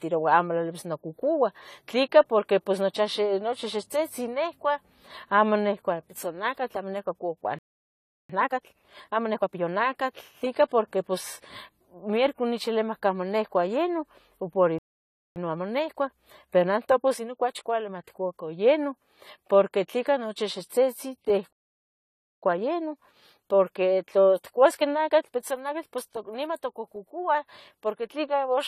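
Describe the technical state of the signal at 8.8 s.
At 8.8 s the speech sits inside a time-compressed catch-up running from 8.30 s to 9.70 s, just after "nihcua pitzonacatl amo nihcua". The player is working off a backlog by cutting small pieces out and cross-fading the remainder, so the speech runs at 1.5 times normal speed but keeps its pitch. On a spectrogram, syllables and pauses are squeezed closer together while harmonic spacing stays the same. The waveform shows shortened gaps and small splice seams.

Under this, and across the whole clip, there is plainly audible AAC compression, most likely AAC-LC at a low rate, which fits a bitrate around 32 kbps. Quantising against a hearing model at that rate dulls and smears the sound, giving sibilants a fizzy, warbling texture. On a spectrogram, the top of the spectrum is cut off.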